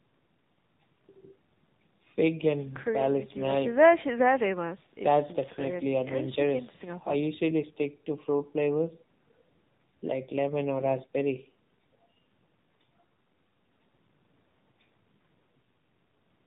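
Speech carrying AMR narrowband mobile codec damage throughout: nothing passes above 4 kHz, and a buzzy, synthetic edge, unlike plain low-pass muffling, fits AMR-NB at roughly 7.4 kbps.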